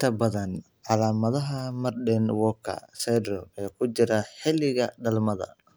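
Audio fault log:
No audible faults anywhere in this speech recording.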